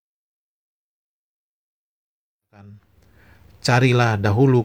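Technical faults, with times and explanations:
No technical faults are audible.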